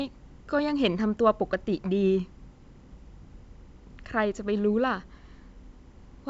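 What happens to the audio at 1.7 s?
At 1.7 s you're hearing timecode bleed, which runs through the whole clip. A 25-frame linear timecode is leaking in, flipping between roughly 1 and 2 kHz, a faint chirpy warble sitting well below the speech.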